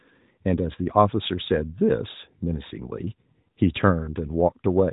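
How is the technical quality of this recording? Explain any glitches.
No glitches or technical faults can be heard here.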